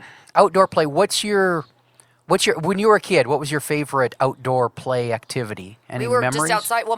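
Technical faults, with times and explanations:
No technical faults are audible anywhere in this speech recording.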